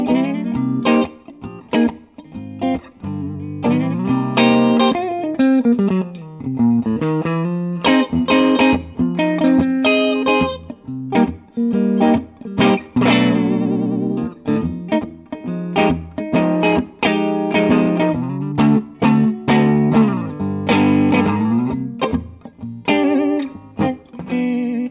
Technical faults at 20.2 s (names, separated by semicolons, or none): none